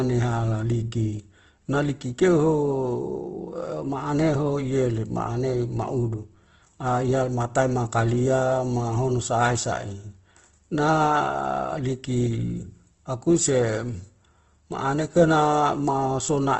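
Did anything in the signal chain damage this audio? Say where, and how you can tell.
Yes, at the codec stage: likely Opus compression starved of bits fills bands with noise throughout, so speech sounds grainy and rough, with nothing above 8.1 kHz.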